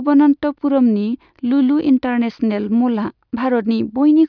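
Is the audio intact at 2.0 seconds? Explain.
Yes, the speech at 2.0 seconds plays through cleanly, with no dropout, click, distortion or other fault at that moment.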